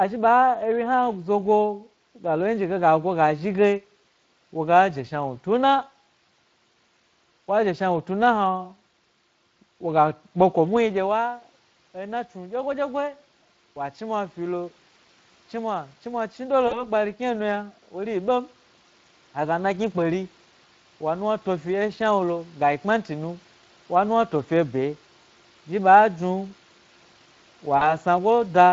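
Speex codec damage runs through the whole recording. This CELP speech codec has too few bits to model the excitation well, so the speech comes out plainly hoarse and grainy, with a noisy, slightly synthetic edge on voiced sounds. The stream runs at around 20 kbps.

Automatic gain rising starts at 11.21 s and continues to 23.45 s, just before "wa nuwna fio fyo". Around 10.5 s the talker draws back from the microphone and the input drops by about 11 dB. The gain control then treats the signal as too quiet and raises its gain slowly, by about 10 dB over those twelve seconds. Voice and room noise swell together, which is the clue that this is gain change and not the talker returning.

VoIP packet loss concealed by the speech codec occurs from 16.67 to 16.84 s and again from 27.77 to 27.92 s. Each gap is 40 ms of missing audio, which fits two lost 20 ms packets. The decoder fills the hole by repeating its last pitch and filter at falling gain, so the sound smears into a buzzy tone or coloured noise that fades. 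Because each rebuilt frame feeds the next, the voice stays weak or distorted for a short stretch after real audio resumes.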